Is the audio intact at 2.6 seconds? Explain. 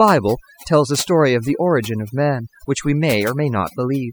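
No. At 2.6 seconds the speech is affected by overdone noise removal, which runs through the entire clip rather than starting or stopping near that point. The noise reduction was set too aggressively, so any frequency band sitting close to the estimated noise floor is pulled far down or gated off, and the quieter parts of the voice are removed along with it. The background drops and breaks up into twinkling, chirpy specks.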